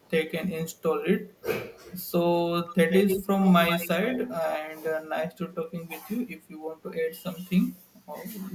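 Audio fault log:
0.0–0.1, 0.72–0.82, 1.34–1.42 s: echo leak, faint 175 ms delayed copy far below the speech, likely from residual loudspeaker pickup. A discrete repeat, unlike reverb's smear.
2.67–3.89, 4.07–4.57 s: echo leak, 128 ms delayed copy about 5–10 dB below the speech, likely an under-cancelling echo canceller.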